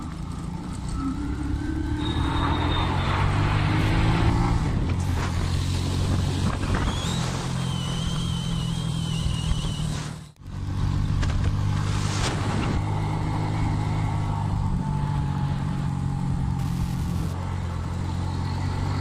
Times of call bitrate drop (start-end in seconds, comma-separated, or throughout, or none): none